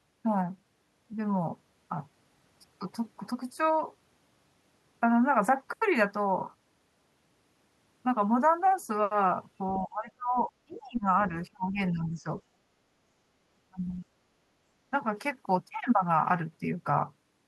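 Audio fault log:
9.79 to 11.09 s, 11.51 to 12.26 s, 13.69 to 13.80 s: speech suppressed in double talk. The speech drops sharply, by around 25 dB at worst. An echo canceller likely turned this talker down along with the loudspeaker echo while both sides talked at once.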